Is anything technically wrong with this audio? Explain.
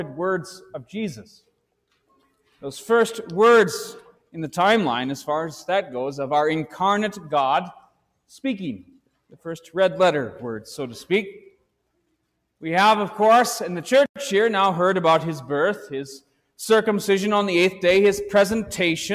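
Yes: sound cut by the noise suppressor at 4.08–4.35, 7.77–8.31, 8.87–9.08 and 16.2–16.59 s. The suppressor misjudges steady or fading sound as noise and pulls it down by about 18–19 dB, shortening decays. Unlike a dropout, the sound thins rather than vanishing, and sharp onsets survive.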